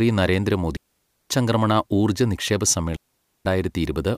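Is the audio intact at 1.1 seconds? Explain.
No, at 1.1 s the speech sits inside a digital wireless dropout from 0.77 to 1.30 s: the receiver, short of data, mutes cleanly for 0.54 s with no surrounding noise burst, unlike an analogue dropout.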